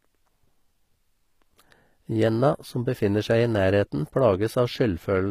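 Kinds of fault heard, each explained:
HE-AAC compression: The treble is likely rebuilt by copying lower bands upward, so the upper range sounds synthetic rather than real. Damage is plainly audible in this speech, nothing reaches above 15.5 kHz, and the quality fits roughly 24 kbps HE-AAC v2.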